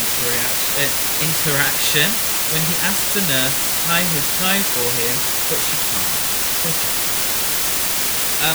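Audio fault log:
throughout: low bit depth with dither. The speech is carried on only 3 bits. Dither added before rounding turns the coarse quantisation error into steady white noise, heard as a constant, even hiss roughly 5 dB louder than the speech itself, with no grainy distortion.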